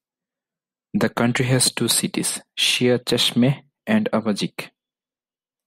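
No technical faults are audible anywhere in the recording.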